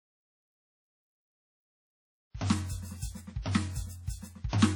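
A low-bitrate transform codec, likely WMA compression at something like 32 kbps, has starved the music of bits throughout, smearing quantisation noise over tens of milliseconds. The result is heavy ringing, a washy haze, and hiss that breathes with each phrase, with nothing above 19.4 kHz.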